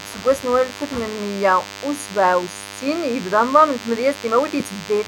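DECT cordless phone buzz runs throughout this speech clip, a thin, steady 100 Hz buzz rich in harmonics sitting roughly 15 dB below the speech. A nearby DECT handset or base transmits a radio burst every 10 ms, which the audio circuitry rectifies into sound.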